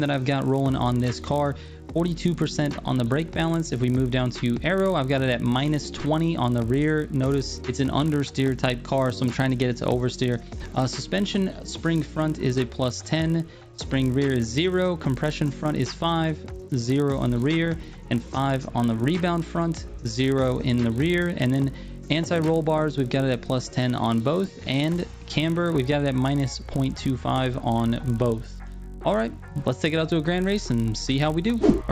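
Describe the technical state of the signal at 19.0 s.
At 19.0 s the resampler is restarted on every block, as it is throughout the clip. Each 20 ms block is converted from 16 kHz to 48 kHz in isolation, leaving small errors at every edge. These fuse into a 50 Hz buzz that, unlike mains hum, vanishes whenever the sound stops.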